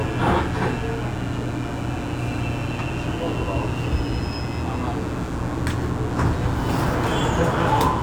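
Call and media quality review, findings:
Steady raspy mains buzz under the sounds, whole clip, about 15 dB below them. 60 Hz hum with harmonics into the kHz range. Probable dimmer, rectifier or unshielded line injecting switching spikes twice per mains cycle.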